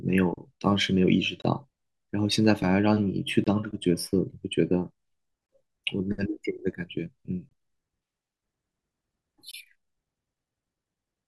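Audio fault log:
1.42–1.44 s, 3.44–3.47 s, 5.47–5.49 s, 7.49–7.51 s, 9.51–9.54 s: gap between chunks. The speech is cut by a hard-edged silence of about 23 ms, once every 2 s of audio, as if each chunk starts late and leaves a hole at the join. Unlike a dropout or lost packet, nothing is missing: the speech resumes exactly where it stopped, and the holes are evenly spaced rather than random.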